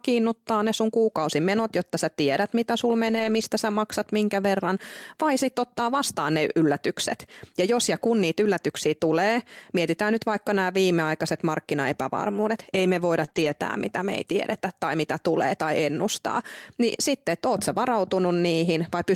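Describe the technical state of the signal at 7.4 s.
At 7.4 s the speech signal is intact, with no technical fault audible at that moment.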